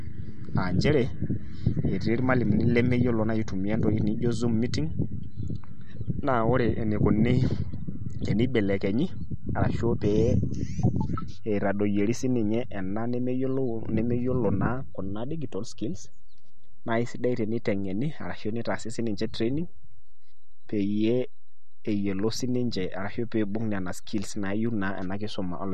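From start to finish the speech carries a DC offset: the entire waveform sits displaced from the zero line by a constant amount. It isn't audible as such, but it eats into headroom, and a spectrogram shows a steady band of energy pinned at the very lowest frequencies.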